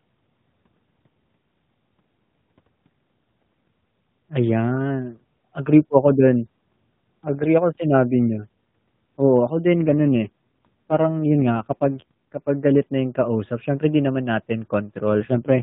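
Speech coming over a narrowband mobile link turns rougher, buzzier and more synthetic from 9.72 s to 12.51 s, clearing just before "galit na yung kausap", and again briefly from 15.11 s to 15.62 s, with no gap and no change in bandwidth. These are AMR rate drops: the codec steps down its bitrate, which fits a fall from 12.2 to 5.9 kbps, leaving fewer bits to model the voice.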